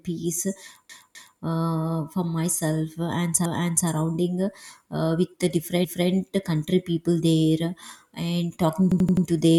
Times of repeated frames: 0.89-1.41, 3.45-3.88, 5.84-6.10, 8.92-9.26

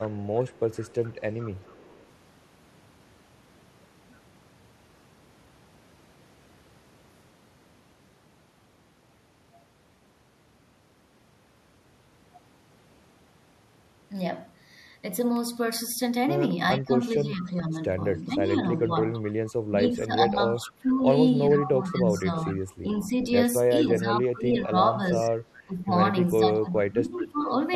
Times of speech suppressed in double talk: 16.75-17.75, 18.28-23.17, 23.80-27.39

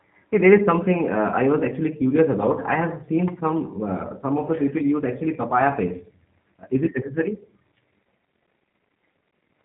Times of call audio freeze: none

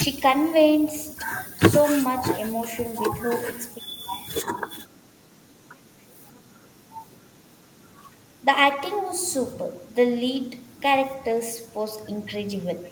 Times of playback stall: none

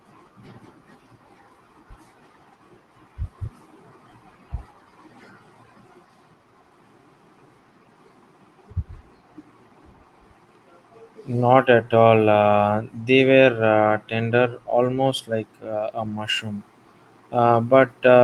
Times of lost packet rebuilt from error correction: 12.15-12.17, 16.03-16.17

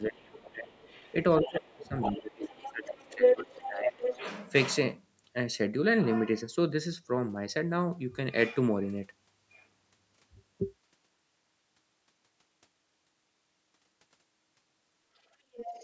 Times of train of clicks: none

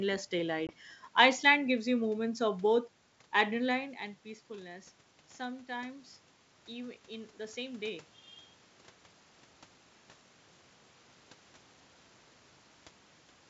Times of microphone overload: none

